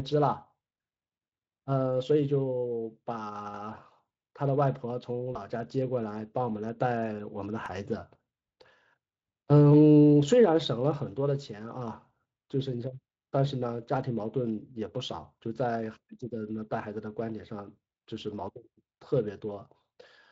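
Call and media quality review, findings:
Brief buzzy smear with the level sagging, 5.33–5.38 s, then a short weak recovery. VoIP packet loss concealed by the speech codec: the decoder extrapolated pitch and filter over what fits a single lost 20 ms frame, decaying the gain.

Sharp regular ticks, five of them between 7.66 and 8.62 s, about five per second, each lasting a couple of milliseconds at most. CD scratch ticks: a disc blemish exceeded error correction once per rotation, so the player interpolated or muted the damaged samples.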